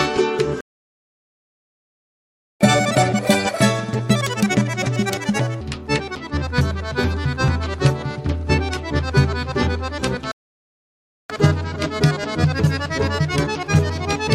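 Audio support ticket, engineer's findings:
Playback stall, 0.61–2.61 s: sound cuts to silence mid-flow for 2.0 s, then resumes. Output likely starved of data or player thread blocked; nothing reaches the device until it recovers.

Catch-up at higher speed, 2.61–5.61 s: audio runs fast and high, 1.5x speed, pitch up around seven semitones, then drops back to normal. Player resampling the backlog to recover time lost in the stall.

Playback stall, 10.32–11.30 s: silent gap of about 0.98 s mid-flow before sound returns. Same mechanism, likely buffer underrun or blocked playback thread.

Catch-up at higher speed, 11.30–14.30 s: milder speed-up, 1.1x, pitch raised by about 1.5 semitones, settling at the end. Resampled catch-up after the second stall, smaller ratio.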